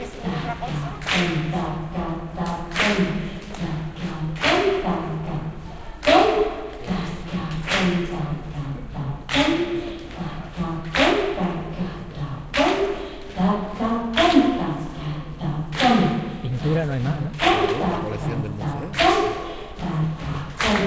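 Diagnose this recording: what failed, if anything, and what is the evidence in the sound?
Nothing here has gone wrong: the audio has simply come through a call path, which you can hear in the way nothing reaches above 8 kHz, and there's no failure at any stage to point to.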